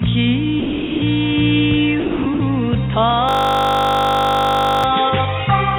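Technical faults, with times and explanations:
0.6 to 1.02 s, 2.0 to 2.26 s and 2.34 to 2.4 s: sound dropped by the voice detector. The audio gives way to steady comfort noise for 420 ms, 260 ms and 60 ms. The likely cause is the sender's detector mistaking these stretches for background and stopping transmission.
3.29 to 4.84 s: system hang loop. A single 20 ms piece of audio repeats about 77 times, producing a steady buzz at 50 Hz. The system froze while the hardware kept replaying one buffer. The buzz sits inside the call path's 4 kHz band limit.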